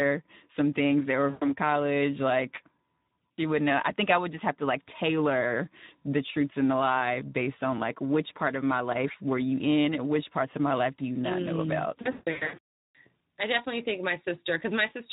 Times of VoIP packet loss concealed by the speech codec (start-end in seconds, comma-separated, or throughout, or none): 1.29-1.52, 12.01-12.59